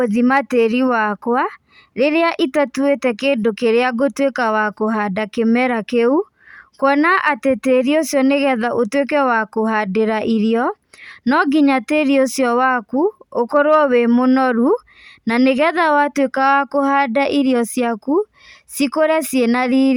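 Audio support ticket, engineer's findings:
Engineer's findings: no audio fault found in the speech clip for this support ticket.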